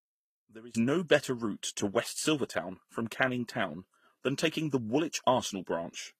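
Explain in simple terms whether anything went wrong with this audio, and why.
Two things went wrong here. The first is a sudden gain jump at 0.75 s. The level leaps up abruptly and stays much louder right through to the end, and the background noise jumps along with the speech. That's the giveaway: nothing faded up smoothly. The volume was likely changed from one sample to the next, with no gentle ramp, as if a setting or digital boost got switched on instantly.

The second runs through the whole clip: transcoding between lossy codecs. The speech sounds like it was squeezed by one compressed format and then squeezed again by another, likely HE-AAC first and then Vorbis. Each pass adds its own artefacts on top of the previous ones, so you hear both kinds layered together. There's also nothing above 15.6 kHz.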